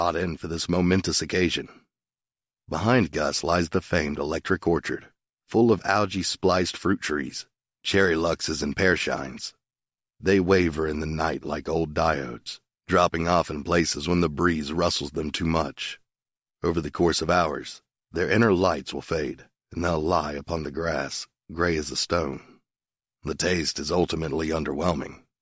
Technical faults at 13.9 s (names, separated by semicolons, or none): none